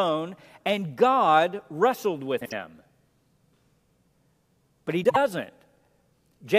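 Frames out of order occur twice in this speech, at 2.40–2.52 s and again at 5.04–5.17 s. Each time two neighbouring runs of frames, about 52 ms each, were decoded in swapped sequence. The short stretch plays with its halves exchanged, giving a garbled flutter, and no time is lost.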